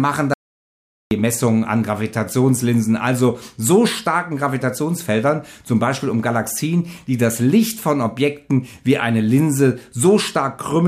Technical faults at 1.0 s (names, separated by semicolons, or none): audio dropout to silence